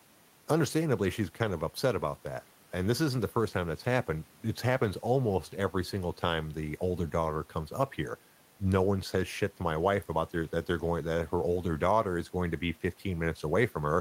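No dropouts, clicks, distortion or level jumps turn up anywhere in the recording.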